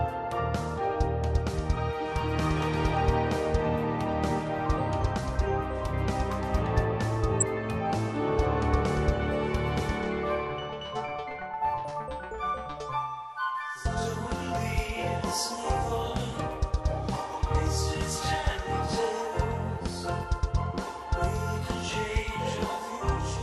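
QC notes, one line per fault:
throughout, MP2 compression: the top end sounds dull and the rest has a gurgly, grainy edge, plainly audible. That's likely Layer II running short of bits, shutting off upper sub-bands and coarsely quantising what's left, which fits something around 80 kbps.
7.40–7.42 s, DAB burbling: a quick few watery blips, only about 20 ms long. Bit errors slipped past the error correction and scrambled samples in a few frames, so single sub-bands get short blips of noise, even though the error rate is very low.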